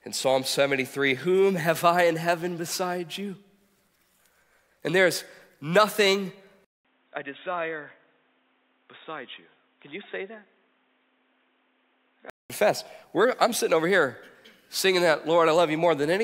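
Input switched to a poorer device, 6.65 to 12.50 s: after a 200 ms silence the speech turns dull and boxy, with nothing above 3.8 kHz, drops about 10 dB, and gains new background noise about 35 dB below it, likely from recording through a narrower-band microphone or headset.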